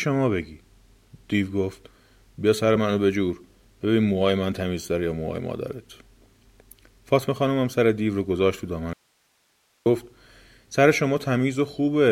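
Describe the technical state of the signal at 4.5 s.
At 4.5 s the speech signal is intact, with no audible dropout, clipping, glitch or other technical fault.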